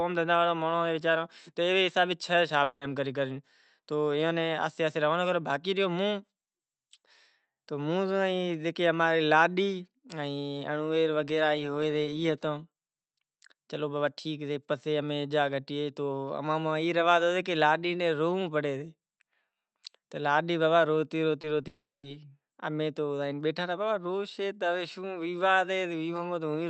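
At 2.63 to 2.83 s the sound is replaced by a fading buzz-like continuation that smears into the restored audio, most likely a long network dropout where about 180 ms never arrived and the receiver stretched the last sound over the gap. Near 21.41 to 21.45 s and again at 21.61 to 21.65 s there are brief wobbly smears, each short concealed packet loss: about 20 ms went missing and was patched by extending the preceding sound before blending back. Right after, from 21.67 to 22.05 s, another long network dropout is likely. The filled tail fades and then leaves roughly 220 ms of silence before the audio returns without the lost part.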